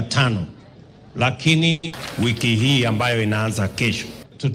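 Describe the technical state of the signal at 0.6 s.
At 0.6 s the signal is intact, with no dropout, distortion, glitch or other fault audible at that point.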